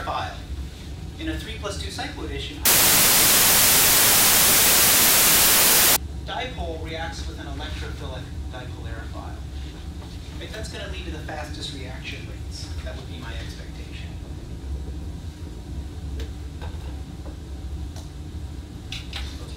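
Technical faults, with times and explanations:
2.65 to 5.96 s: samples built from the wrong bytes. Byte offset, swapped order or misalignment scrambled each value. Noisy low bits dominated, giving broadband noise.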